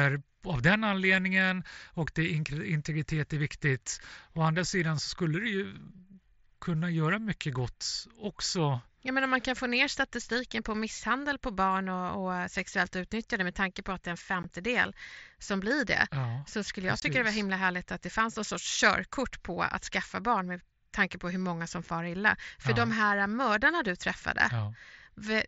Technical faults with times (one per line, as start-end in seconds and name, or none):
14.43 unconcealed Bluetooth headset packet loss
17.00-17.02 unconcealed Bluetooth headset packet loss